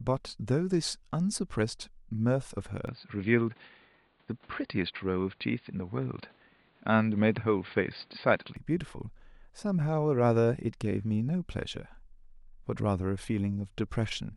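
From 2.87 s to 8.56 s the speech abruptly loses everything above 4.8 kHz and turns dull and boxy, with a faint new background noise well beneath it. Level stays steady and neither change leaves a gap. The likely cause is an input switched to a poorer device.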